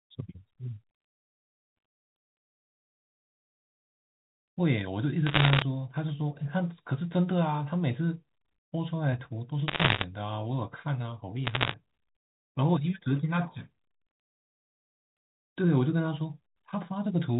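A speech clip with three short bursts of sharp ticking crackle laid over the talking, from 5.27 to 5.62 s, 9.68 to 10.04 s and 11.46 to 11.74 s. The middle burst is the densest. These are bit errors on a digital phone line. Flipped bits in the G.711 mu-law stream each corrupt a single sample. Hits on the sign or upper bits jump the waveform and click, at around one percent of bits, roughly double that in the second burst.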